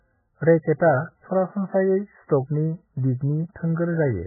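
Throughout, the speech is dull and watery, with nothing above 2 kHz, likely MP3 compression at a very low bitrate; a spectrogram shows a hard ceiling and flickering patches.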